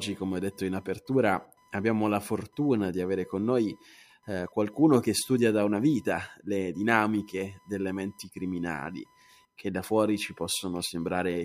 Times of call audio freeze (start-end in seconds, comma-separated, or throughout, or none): none